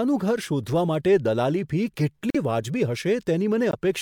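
At 2.30 s the speech drops abruptly into silence for about 62 ms, then resumes at its normal place. This is a corrupt frame muted: damaged compressed frames were rejected by the decoder and replaced with silence, and the gap's length fits three frames of roughly 21 ms. The same happens at 3.71 s, a hole of about 42 ms, consistent with two frames. Timing is preserved in both cases; nothing is shifted or repeated.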